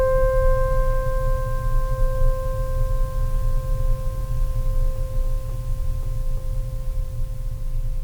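Nothing in this music stood out as a technical problem on listening.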